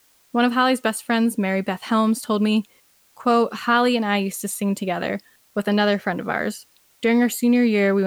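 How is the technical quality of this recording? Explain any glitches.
A steady, even hiss sits under the speech for the whole recording, about 40 dB below the speech level, with no crackle or harshness. This is low bit depth with dither. The hiss level fits a signal stored at around 9 bits. Rounding to so few levels would normally leave gritty distortion that follows the speech. Here, dither noise added before rounding turns that error into constant white noise, so the speech stays clean but is never heard against silence.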